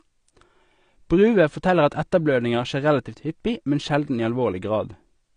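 A low-bitrate lossy encode is the likely cause of what runs through this speech recording from start to finish: AAC compression, with the band limit and texture pointing to AAC-LC at around 32 kbps. The encoder has discarded everything above about 9.9 kHz, so the speech sounds dull and closed-in. Too few bits are left for the remaining spectrum, so sibilants turn fizzy and sustained sounds take on a smeared, warbling quality that is plainly audible.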